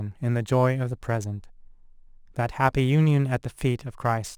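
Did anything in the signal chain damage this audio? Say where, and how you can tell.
Yes. A gritty, inharmonic fizz rides on the speech for the whole clip, strongest on loud and bright sounds and sitting roughly 30 dB below them. This is crude rate conversion from 44.1 kHz to 48 kHz, done by repeating nearest samples without filtering, so the timing error creates tones unrelated to the speech.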